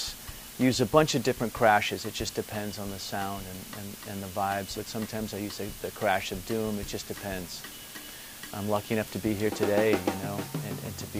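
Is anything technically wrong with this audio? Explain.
Yes. Throughout, the audio was quantised to a low bit depth with dither, consistent with about 7 bits. The dithered rounding error becomes a steady, even hiss roughly 15 dB below the sound, without distortion.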